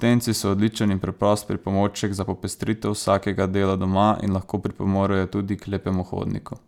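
No faults are audible anywhere in this recording.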